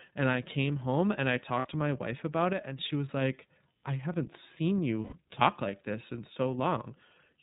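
Throughout, the speech is band-limited with nothing above 4 kHz and sounds clearly rough and synthetic, the signature of the iLBC codec. Its blocky, frame-by-frame texture fits 30 ms frames in the 13.33 kbps mode, unlike the smoother smearing of predictive codecs.

From 1.58 to 1.65 s, after "came home and I", about 60 ms of sound becomes a held, faintly buzzy vowel. These are lost iLBC frames, fitting two 30 ms frames. The decoder repeated the last pitch cycle mixed with noise, and clean speech returns at once with "to my wife about". The same happens from 5.04 to 5.14 s, after "like I haven't seen", with about 90 ms of buzzy hold before "talk like this in".

From 2.53 to 2.78 s, after "to my wife about", speech and background both drop abruptly by about 6 dB and recover before "she was like I". This is a sudden gain jump, likely a gain change applied with no ramp. Unlike a concealed loss, the content stays intact and only the level shifts.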